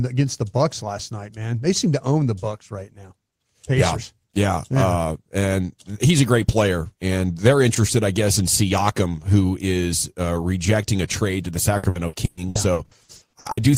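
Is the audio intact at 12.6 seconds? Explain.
No. Repeated packet loss (robotic sound) runs from 11.77 to 13.60 s, just after "a trade to the". Short holes, the longest 120 ms, are patched by stretching the preceding sound, so 43% of the stretch is concealed and it comes out choppy and robotic.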